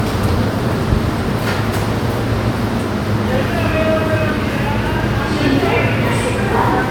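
Generation loss runs throughout this everyday-sound recording, with swirly, hollow, smeared texture, blurred attacks and nothing above 19.9 kHz, likely from repeated MP3 re-encoding, around four passes, consistent with 128 kbit/s.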